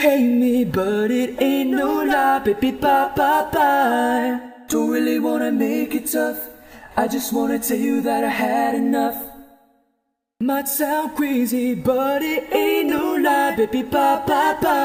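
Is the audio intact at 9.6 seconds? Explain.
Yes, at 9.6 seconds the audio runs continuously with no dropout, click, distortion or other fault to be heard.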